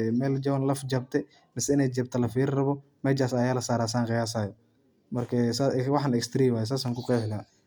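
Nothing in the speech recording points to a technical fault at any point in the signal.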